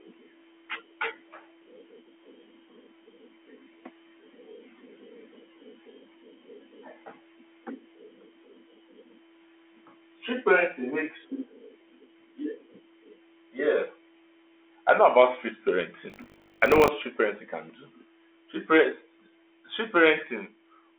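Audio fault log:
16.08–16.89 s, buffer tearing: a rattling, robotic buzz at 50 Hz rides on the speech, because writing and playback cross inside every 20 ms buffer, leaving a small slice of audio roughly 70 ms old butted hard against current sound on both sides.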